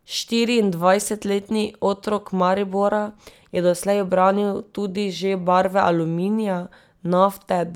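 No technical faults are audible anywhere in the speech; nothing to report.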